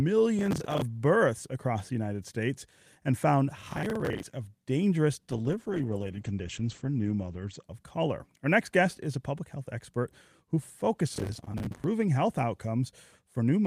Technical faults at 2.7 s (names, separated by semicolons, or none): none